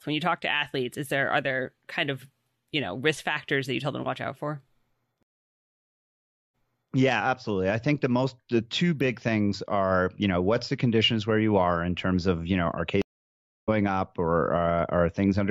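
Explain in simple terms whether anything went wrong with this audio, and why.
Two stream reconnects break the speech. At 5.23 s the sound drops out for 1.3 s, then resumes 0.4 s earlier, repeating a little. At 13.02 s, after "of you know are", it goes silent for 0.66 s and resumes about half a second later, skipping ahead.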